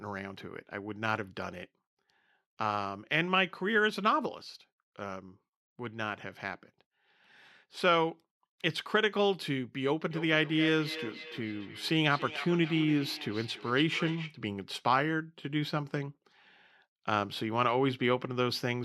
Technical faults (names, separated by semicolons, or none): feedback echo between two devices